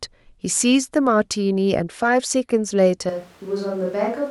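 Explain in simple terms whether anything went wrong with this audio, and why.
Something does go wrong at 3.10 seconds: the speech suddenly sounds farther away, roomy and hollow, thinner in the low end, noticeably quieter, with more background noise, and it stays that way to the end. That points to a likely switch to a distant microphone. A simple volume dip would only make it quieter, not echoey. Here the tone and room sound change instantly, as if a different microphone took over.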